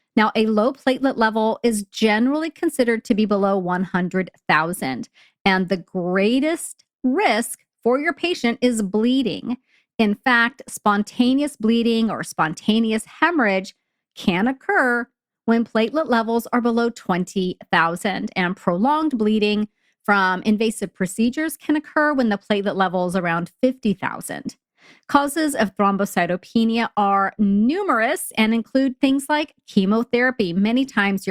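No technical faults are present, so there is nothing to describe in time order.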